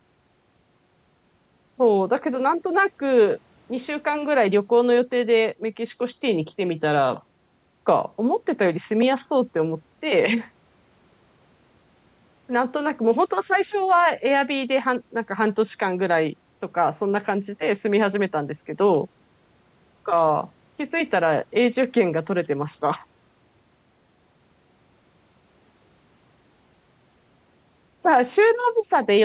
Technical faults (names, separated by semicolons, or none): none